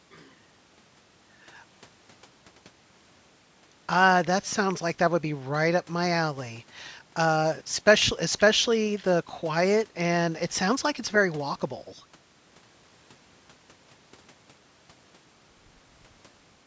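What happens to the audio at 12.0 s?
Nothing goes wrong at 12.0 s; the speech is intact there, with only the ordinary call microphone processing trimming the lowest bass and nothing reaching above 8 kHz.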